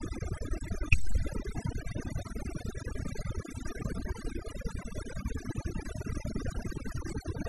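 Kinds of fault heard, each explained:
Overdone noise removal: a noise reducer was pushed too hard, muting any frequency band close to its noise estimate, including the quieter parts of the speech; across the whole clip the background drops and breaks up into twinkling specks.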